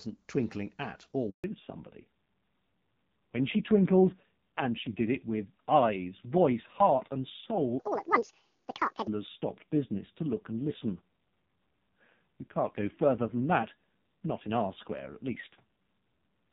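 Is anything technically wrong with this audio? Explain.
Yes, there are three faults.

From 1.30 to 1.44 s there is a handover gap. The call switched networks, no frames arrived for 140 ms, and the speech drops abruptly to silence.

From 1.44 s to the end there is a fallback to narrowband. The call left the clear HD Voice link heard at the start, and everything above 4 kHz disappears. The speech becomes duller and rougher, which fits a low-rate narrowband codec around 5.9 kbit/s.

From 7.79 to 9.07 s there is a section at the wrong speed. It runs 1.83 times too fast, roughly 10 semitones higher, so the speech sounds high and hurried. This is likely playback against the wrong clock.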